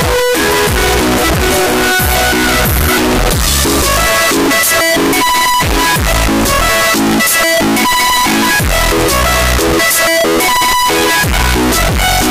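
A likely mix-up of signed and unsigned samples runs from start to end, flipping the top bit of what sounds like 16-bit audio, so every zero crossing leaps across the full range. The result is loud, harsh distortion throughout, with quiet passages as loud as everything else.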